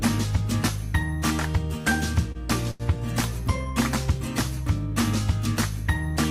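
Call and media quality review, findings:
Short stall from a late packet at 1.81–1.87 s, 2.32–2.38 s and 2.71–2.83 s. Last sound held, slight buzz or dip, then resumes. Jitter buffer ran empty waiting on a late packet, and the receiver stretched the audio for 26, 29 and 87 ms. Not loss concealment: nothing skipped, playback continues from the same point, and latency grows by the fill each time (87 ms at the third).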